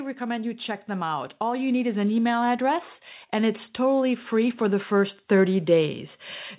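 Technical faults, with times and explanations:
0.05 to 6.04 s, automatic gain rising: the speech and the background noise swell together by about 12 dB over nearly six seconds. The automatic gain control judged the input too quiet and kept raising its gain, all heard through a narrowband call path ending at 4 kHz.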